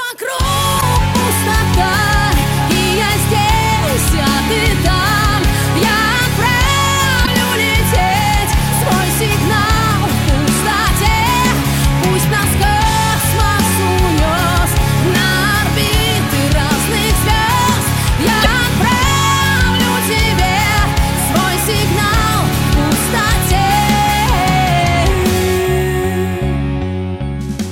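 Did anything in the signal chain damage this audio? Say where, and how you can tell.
Yes, at the codec stage: damaged data in a compressed stream, heard as brief glitches at 0.77–0.83 s, 7.22–7.28 s and 18.41–18.46 s. Corrupt frames are misdecoded until the decoder resyncs. Unlike a buffer dropout, the fault lies in the compressed data itself rather than in delivery timing.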